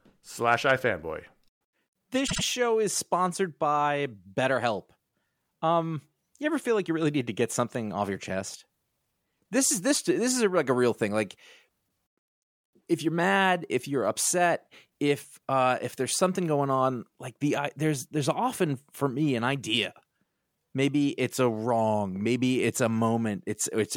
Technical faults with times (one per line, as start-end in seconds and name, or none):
2.26-2.42 repeated frames